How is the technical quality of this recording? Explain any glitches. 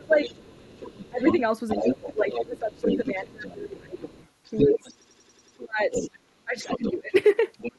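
The recording has clear problems: the talker's speech drops out repeatedly, a second voice runs underneath most of it, and one stretch stutters mechanically.

Speech suppressed in double talk shows up three times: briefly from 0 to 0.33 s, then from 1.1 to 3.98 s, and from 4.57 to 7.14 s. The talker's level sinks in those spans, by roughly 25 dB at the start, around 15 dB in the middle stretch and as much as 30 dB in the last. This is likely an echo canceller that heard both parties at once, could not tell the talker from the loudspeaker echo, and pulled everything down. What separates it from a plain dropout is that the losses coincide with the other voice being present.

The other side's voice leaking through runs from 0.22 to 6.92 s, sitting only about 5 dB below the talker, and returns faintly from 7.58 to 7.77 s at about 10 dB down. A second speaker can be heard alongside the main one, most likely loudspeaker playback that the echo canceller failed to remove from the microphone. 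Unlike crosstalk between cables, it is a whole distinct voice rather than a faint bleed.

A system hang loop occurs from 5.02 to 5.57 s. A 92.88 ms piece of audio repeats exactly six times at 10.8 Hz, producing a machine-gun stutter in place of about half a second of real sound. The loop length fits a 4096-sample buffer being replayed while the computer or driver froze. What separates it from a stutter in the original performance is that every repeat is identical and evenly spaced.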